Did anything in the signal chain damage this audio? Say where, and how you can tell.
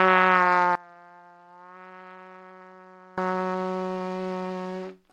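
Yes. From 0.75 to 3.18 s the sound drops by about 24 dB. This is likely one channel inverted in analogue wiring, cancelling in mono.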